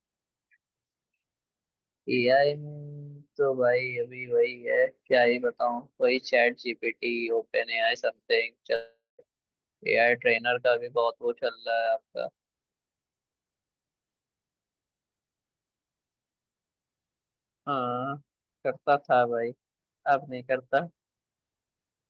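A speech recording, carried over a call path with codec grain and a top end that stops around 12 kHz. From 8.75 to 9.22 s there is a long network dropout. The sound does not simply stop. The last bit of speech is stretched into a buzz or hiss that fades away. About 0.2 s of near silence follows. Speech then resumes, but roughly 0.44 s of it never returns. The likely cause is a burst of lost packets that the receiver's concealment could not cover.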